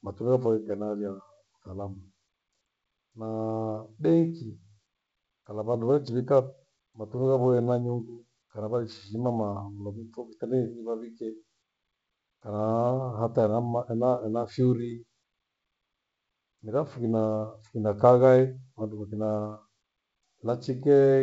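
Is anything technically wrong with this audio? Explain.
No, nothing is wrong with this speech: it carries the expected G.722 wideband coding at 64 kbit/s, with the band extending to about 7 kHz and at most a faint trace of coding hiss in the upper band.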